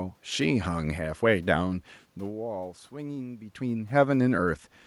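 No system faults are audible in this speech; the room noise belongs to the recording, and the level shifts around 2 s and 3.5 s are the talker moving relative to the microphone.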